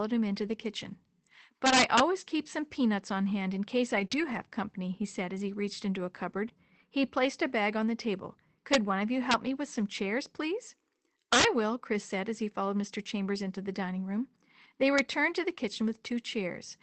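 From 0.33 to 0.51 s, lost packets were rebuilt from error correction: the decoder played low-bitrate backup copies carried in later packets, so nothing drops out. The sound just turns rougher and noisier for about 100 ms, with no smear or repeat. An integer overflow follows from 1.66 to 2.00 s, just before "keep some peanuts on". Peaks about 7 dB past the limit wrapped to the opposite sign, giving violent cracks far sharper than the flat-topped distortion of clipping. Error-correction rebuilds return from 3.95 to 4.05 s. At 4.07 to 4.12 s there is a short concealed packet loss: about 20 ms never arrived and was filled by extending the preceding sound, heard as a brief smear or wobble rather than the noisy roughness of the rebuilt frames. More error-correction rebuilds run from 4.12 to 4.42 s (about 160 ms) and again at 4.88 to 4.90 s. Overflow cracks return at 8.74 s after "bag on the table", with error-correction roughness at 8.88 to 8.90 s, then further cracks at 9.31 to 9.34 s and 11.33 to 11.44 s, the latter about 8 dB over the limit. 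A last overflow crack comes at 14.99 s, right at the limit, just before "to the". Throughout, the Opus call path caps the audio at 8 kHz.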